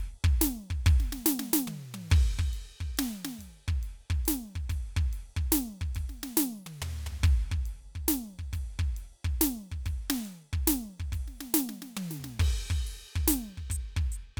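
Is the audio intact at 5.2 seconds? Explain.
Yes, at 5.2 seconds the music plays through intact, with no dropout, click or other fault to be heard at that moment.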